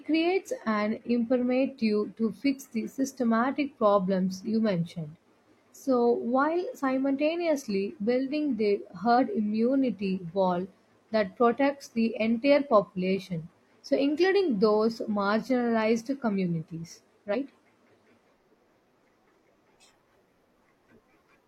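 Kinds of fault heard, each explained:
Damaged data in a compressed stream: at 9.15 to 9.19 s and 17.30 to 17.36 s, corrupted bytes in the encoded speech make the decoder misread frames and lose sync while it hunts for the next valid header, giving two short blips lasting about 40 and 54 ms.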